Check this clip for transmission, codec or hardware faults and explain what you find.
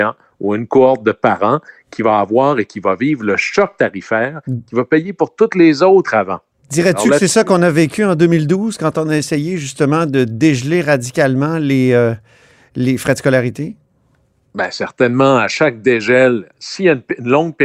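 Nothing stands out here: the speech comes through steady and intact, with no transmission, codec or hardware problem to point to.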